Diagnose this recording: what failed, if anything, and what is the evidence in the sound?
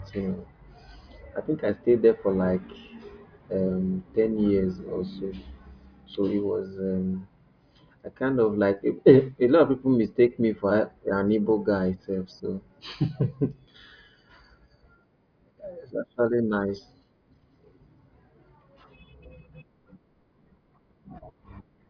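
Nothing failed here; every stage of the chain is doing its job and there's no fault to point to anywhere in this speech recording.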